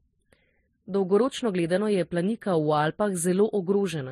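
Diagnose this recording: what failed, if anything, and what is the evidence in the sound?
At the driver or buffer stage, one channel ran a few samples late, roughly a tenth of a millisecond, before the two were summed to mono. This channel delay causes comb filtering throughout the speech: cancellation notches starting around 5 kHz give it a hollow, phasey sound.

At the codec stage, the likely cause is transcoding between lossy codecs, an MP3 encode re-encoded as Vorbis. Throughout, nothing is present above 14 kHz, and two distinct flavours of compression artefact are heard together, consistent with a low-bitrate MP3 pass followed by a low-bitrate Vorbis pass.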